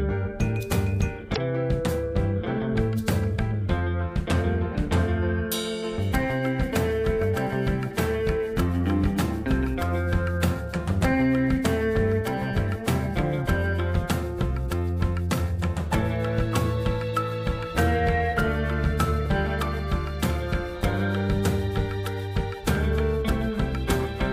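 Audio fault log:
1.32–1.38 s, damaged data in a compressed stream: for about 56 ms the audio breaks up as the decoder hits corrupted frames, misreads them, loses sync and hunts for the next valid frame header before normal playback returns.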